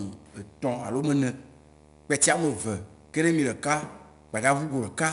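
Speech runs the full length of the recording with two faults present from start to finish. A video or display buzz sits underneath it at 75 Hz, the field rate of a monitor or video signal coupling into the audio path, with hash riding above the fundamental. It sits roughly 30 dB below the speech. The second fault is 4-bit ADPCM compression, with plainly audible damage. Each sample is coded as a coarse 4-bit step from a predicted value, so the quantisation error rises and falls with the speech level, giving a gritty hiss on louder syllables and roughness on sharp onsets where the adaptive step size lags behind. Nothing is present above 10.6 kHz, which dulls the top end and fits a sample rate around 22 kHz at about 89 kbps.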